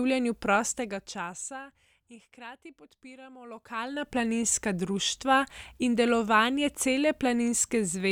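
A speech clip with nothing technically wrong with it.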